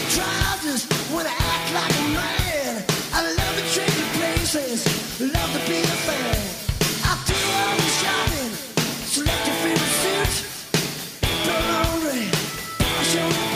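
At 11.50 s, damaged data in a compressed stream makes the decoder lose frame sync, giving a brief glitch in the audio.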